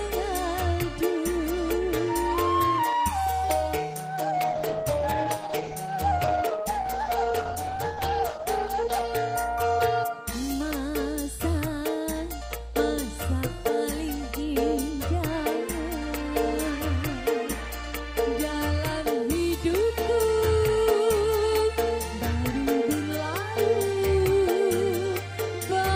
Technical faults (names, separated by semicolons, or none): call bitrate drop